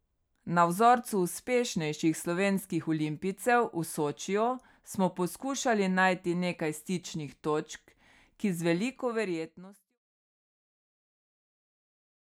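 No faults found in the speech; the level fades out smoothly from around 8.5 s to 10.0 s, with no click or hard edge at the tail.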